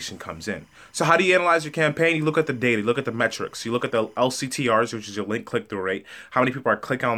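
Between 0.0 and 4.17 s, a faint chirping warble near 1 and 2 kHz sits under the speech: timecode bleed, 25-frame timecode leaking across.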